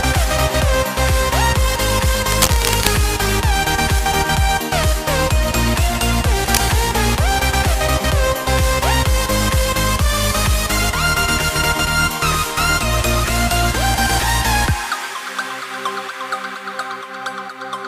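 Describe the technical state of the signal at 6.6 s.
Right around 6.6 s you're catching the tail end of a burst of cable scratch noise that runs from about 6.42 to 6.57 s. It's a short, ragged rustle of scratchy noise sitting only a little below the level of the sound itself. The likely cause is a worn cable or connector being moved, with its contact resistance jumping around and spraying uneven noise into the signal for that moment.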